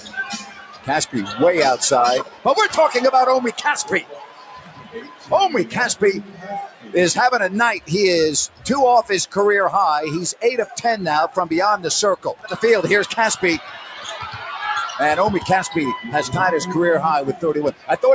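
A noise suppressor tuned for speech stays active across the whole clip and treats sustained, non-speech sound as noise. Its gain swings by around 15 dB, so onsets pass while held material and decay tails are pulled down, producing a pumping, thinning texture throughout. The band-limiting from call microphone processing, with nothing above 8 kHz, is separate and expected.

Against that background, sound cut by the noise suppressor shows up as distinct dips of about 13 to 14 dB at 0.00–1.36 s, 2.23–2.46 s, 3.52–6.94 s, 8.47–8.65 s, 10.33–11.37 s, 12.17–14.96 s and 17.33–17.89 s. The longer spans, near 0 s, 3.5 s and 12 s, lose roughly one to two seconds of sustained content each. The shorter ones clip a fraction of a second, heard as sudden sagging or truncated tails.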